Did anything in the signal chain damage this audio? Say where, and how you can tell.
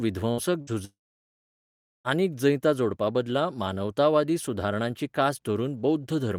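Yes. At 0.31 to 0.40 s and 0.61 to 0.70 s, the speech smears into a short fading buzz or hiss, then jumps ahead. This is a burst of packet loss on the network: about 60 ms was concealed and skipped each time.

From 0.85 s, the sound briefly fades into a buzz or hiss, then goes silent for about 1.1 s. The speech returns at 2.08 s with "आनीक जैतां जोडपाबदला", with about 1.2 s gone, likely a long network dropout.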